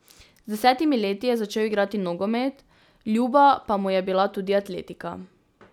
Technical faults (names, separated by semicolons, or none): none